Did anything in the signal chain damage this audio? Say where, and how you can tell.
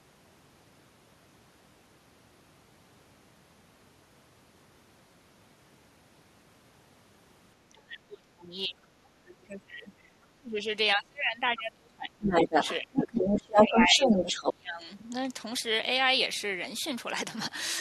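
Yes. Speech is suppressed in double talk, in call processing. It drops by about 20 to 30 dB at 7.69–10.66, 10.95–12.55, 12.81–13.3 and 13.49–15.12 s. An echo canceller likely ducked both talkers at once.

The other side's voice also leaks through. There is a faint scrap at 9.5 s, about 35 dB down. From 12.22–12.76 and 12.97–14.53 s it runs louder than the speech. Uncancelled loudspeaker echo is the likely source.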